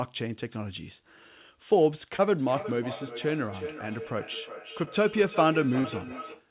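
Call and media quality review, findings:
Brief smears in the speech at 2.16–2.20 s, 4.84–4.89 s and 5.81–5.86 s, the last one longest. Short concealed packet loss in the receive path: roughly 20 ms, 20 ms and 40 ms of audio arrived too late for the decoder. The concealment extended the preceding sound for about 24, 22 and 36 ms, then crossfaded back to real audio.

Thin, ringing repeat of the speech from 2.38 s to the end, recurring about every 0.4 s, peaking about 13 dB below the direct speech. Feedback echo between two devices: a second endpoint in the same room replays what the first device's microphone sent, and the first microphone picks that playback up again. The local echo canceller removes only its own device's output, so the loop persists. Repeats are band-limited like the direct signal, nothing above 4 kHz.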